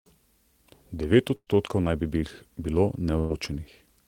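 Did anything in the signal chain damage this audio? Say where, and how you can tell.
Yes. At 1.35 to 1.50 s and again at 3.19 to 3.33 s, the speech briefly freezes into a held, fading sound before jumping ahead, with roughly 120 ms of the original missing each time. In the first gap the fill fades fully and leaves about 50 ms of silence, while the second resumes before falling quiet. This is a burst of packet loss on the network: the receiver stretched the last audio for about 113 ms while attenuating it, then carried on from later material.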